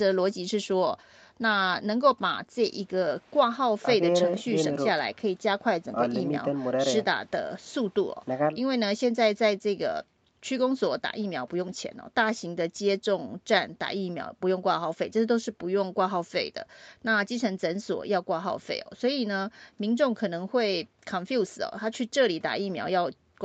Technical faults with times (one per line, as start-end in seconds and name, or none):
none